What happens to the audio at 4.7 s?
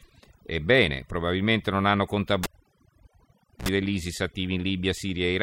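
At 4.7 s the clip is still under overdone noise removal, which runs through the whole recording: an over-aggressive noise reducer pulls individual frequency bands down to nothing whenever they sit near its noise estimate, taking quiet speech detail with them. The background drops and breaks up into twinkling specks.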